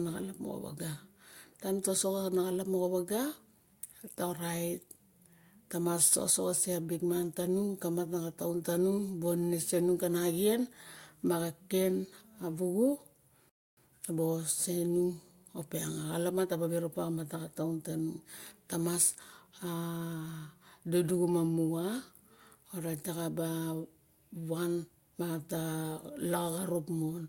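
At 13.49 s the speech halts in a rebuffering stall: playback drained its downloaded audio and waited for more data. Silence holds until 13.77 s, about 0.28 s added, then the speech resumes exactly where it stopped, with nothing missing.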